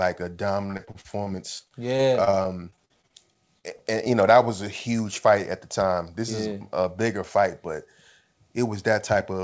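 From 0.66 to 4.08 s the speech breaks up with repeated packet loss, giving the robotic sound typical of a call whose packets keep arriving late or not at all, and it clears just before "you know that was". Around two dozen short holes, none longer than about 43 ms, are each patched by stretching the previous sound, so roughly a sixth of the stretch is synthetic fill and other fragments simply vanish. That rapid, robotic choppiness over several seconds sets it apart from a single isolated dropout. Above 8 kHz the G.722 call path is silent throughout.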